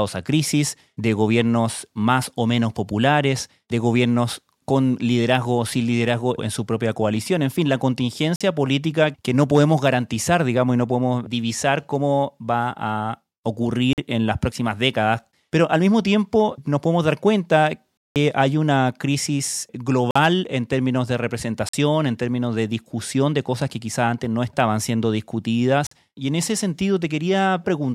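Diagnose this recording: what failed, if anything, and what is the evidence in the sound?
Driver or buffer stage: blocks of digital silence, 46 ms at 8.36, 13.93, 20.11, 21.69 and 25.87 s, and 186 ms at 17.97 s, which fits missed 2048-sample buffer fills. Each shows as a flat gap in the waveform and a blank strip on the spectrogram.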